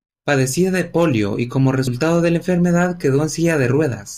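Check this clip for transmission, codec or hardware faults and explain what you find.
One fault is audible. Damaged data in a compressed stream at 1.87 s: part of the encoded stream there was corrupted, so the decoder misread that frame, lost sync and searched for the next valid frame header. It comes through as a very brief blip.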